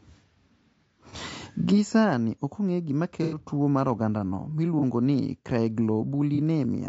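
From the start, the speech is rough and grainy, with noise filling the gaps between harmonics and a thin, synthetic top band. This is likely low-delay AAC compression (AAC-ELD), whose short frames resolve pitch poorly, and the damage fits a bitrate around 32 kbps.

AAC frame loss with concealment then appears as brief smeared, noisy patches at 1.10–1.15 s, 4.79–4.84 s and 6.35–6.39 s, each consistent with one lost 30 ms frame patched from the previous spectrum. A longer 90 ms gap at 3.23–3.38 s, fitting three lost frames, gives a more extended phasey smear.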